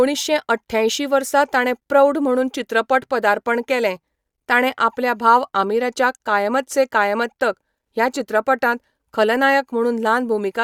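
Nothing stood out on listening to this speech recording.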